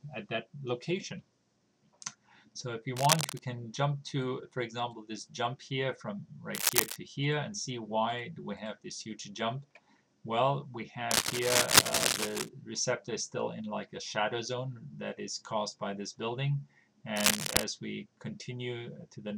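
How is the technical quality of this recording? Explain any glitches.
Four bursts of cable scratch noise break up the recording, at 2.96 to 3.40 s, 6.54 to 6.97 s, 11.11 to 12.49 s and 17.16 to 17.63 s. Each is a dense, ragged scratching rustle laid over the sound, matching it in level in the first and slightly overpowering it in the other three. The likely cause is a worn cable, connector or control being moved, its contact resistance jumping erratically and injecting that uneven noise.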